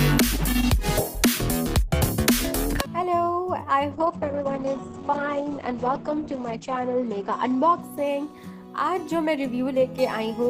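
The audio has a call bitrate drop from 3.93 s to 8.87 s. When the call's bandwidth estimate falls, the encoder gets far fewer bits and codes the sound more coarsely. Here the audio turns rough and muffled. The top end narrows from 20 kHz to 8 kHz. The worst stretch lasts about 2.87 s. The sound fits a fall from around 32 kbps to about 9 kbps. It then recovers by 8.87 s.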